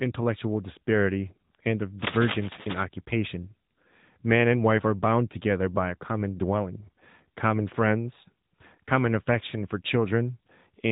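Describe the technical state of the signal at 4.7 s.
At 4.7 s, as throughout, the speech carries AMR narrowband mobile codec damage: a spectrogram shows a hard ceiling near 3.8 kHz, and the voice sounds buzzy and synthetic, consistent with a mode around 10 kbps.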